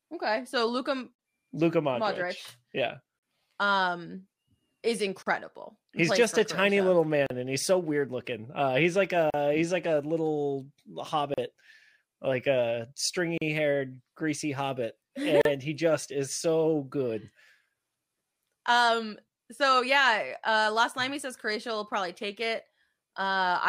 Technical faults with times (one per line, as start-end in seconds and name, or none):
1.15-1.19 gap at a join of encoded pieces
3.19-3.23 gap at a join of encoded pieces
5.23-5.26 gap at a join of encoded pieces
7.26-7.30 gap at a join of encoded pieces
9.30-9.34 gap at a join of encoded pieces
11.34-11.38 gap at a join of encoded pieces
13.38-13.41 gap at a join of encoded pieces
15.41-15.45 gap at a join of encoded pieces